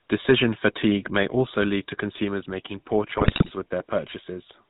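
GSM full-rate coding runs through the whole of this speech clip, with plainly audible damage. The codec models the vocal tract as a filter and excites it with a sparse, regularly spaced pulse train that keeps only a fraction of the original excitation detail, so the voice takes on a buzzy, gravelly roughness. Nothing above 4 kHz survives, and the dull, grainy band fits the classic 13 kbps full-rate coder. GSM bit errors then strike from 3.18 to 3.51 s, where corrupted bits reach the decoder over roughly a third of a second. Damaged filter, pitch and gain parameters bend the spectrum and throw the level around from frame to frame, so the speech breaks into squawks, pops and gargling before clearing once the errors stop.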